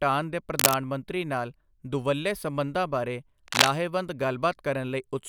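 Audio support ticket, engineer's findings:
Cable scratch noise, 0.58–0.74 s (just before "ਮੰਤਰੀ ਨਾਲ ਦੁਵੱਲੇ ਸਬੰਧਾਂ") and 3.48–3.68 s (after "ਨਾਲ ਦੁਵੱਲੇ ਸਬੰਧਾਂ ਬਾਰੇ"). Dense, irregular rustling bursts, roughly 5 dB above the speech. Likely a worn cable or connector shifting and changing contact resistance. Not isolated clicks or steady crackle.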